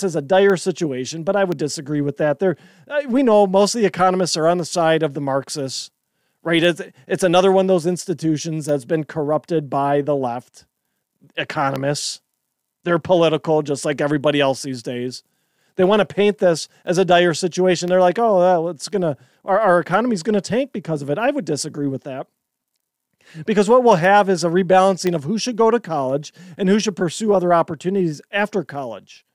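Periodic USB or driver dropouts run through this speech recording from 0.50 s, just after "as a", to 29.17 s. Every 1.024 s the audio path stalls and a tiny fraction of a millisecond is replaced by silence, giving about thirty evenly spaced ticks.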